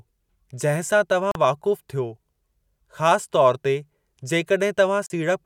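Speech, with two short holes in the sound. The first runs from 1.32 to 1.36 s, the second from 5.06 to 5.10 s. Each gap is about 37 ms of silence. The speech then resumes further along, as if it had kept playing underneath. This is likely a Bluetooth dropout. Packets failed to reach the headphones in time and were discarded. A gap this size fits roughly two lost packets each time.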